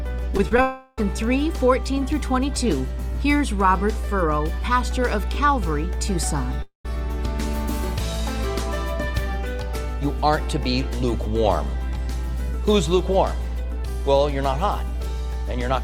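A steady 60 Hz mains hum runs through the whole clip at roughly the same level as the wanted sound, so it never sits quietly underneath. Power-line current leaking into the signal path, through a ground loop or a nearby transformer, produces it. Unlike wind rumble or handling noise, its pitch and level stay fixed, a low drone with some low harmonics.

Three short concealed packet losses come close together near the start: 0.37 to 0.40 s, 0.49 to 0.52 s, and 0.57 s. Each time, a brief slice of audio failed to reach the decoder, and the receiver covered the gap by stretching the preceding sound before blending back. They come across as quick smears or wobbles. What separates them from clicks or edits is that the sound is briefly prolonged rather than cut or spiked.

Two long network dropouts follow, at 0.62 to 0.98 s and at 6.62 to 6.85 s. In each, a stretch of audio is lost, likely because nothing arrived over the network, and a continuation of the last sound fills in, fading as a buzz or hiss. 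In the second, about 120 ms of that stretch ends in silence. When the audio returns, it resumes further on, with the missing portion gone rather than delayed, which distinguishes this from a mute or pause.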